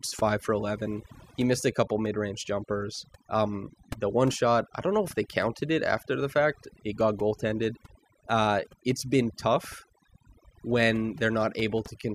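Overdone noise removal runs through the whole clip: a noise reducer set too strong pushes single frequency bands down or off near its noise estimate, taking quiet speech detail too. The background breaks into twinkling, warbling specks, seen on a spectrogram as scattered isolated dots and patchy gaps.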